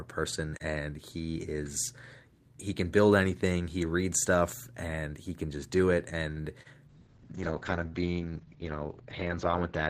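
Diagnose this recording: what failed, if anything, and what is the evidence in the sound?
Right after "can just do it", a short stall from a late packet runs from 6.31 to 6.39 s. This is a network and jitter buffer fault. A packet arrived late, the buffer ran dry, and the receiver stretched the last sound for 52 ms before resuming at the same point. Nothing is lost, but playback now runs 52 ms later. On a spectrogram the harmonic bands go flat and elongated, and the waveform shows a repeated, held cycle pattern.

A short concealed packet loss follows at 6.63 to 6.67 s, also at the network stage. About 20 ms of audio never reached the decoder in time. The receiver covered the gap with 24 ms of synthesized continuation, built from the preceding pitch where it was voiced and from shaped noise where it was not, then blended back into the real signal. It is heard as a brief smear. The spectrogram shows a blurred patch where fine detail is missing.

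A call bitrate drop starts at 6.89 s and lasts until the end. The bandwidth estimate fell, and the Opus encoder went from 32 to 8 kbps, holding the lowest rate for about 2.5 s. This is a codec stage change driven by network adaptation. The coded bandwidth shrinks from 20 kHz to 6 kHz, so the sound turns muffled and coarse. On a spectrogram, energy above 6 kHz vanishes under a hard, flat ceiling.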